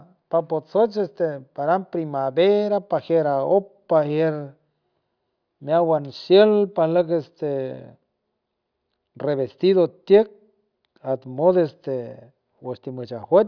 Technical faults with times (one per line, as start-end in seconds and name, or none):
none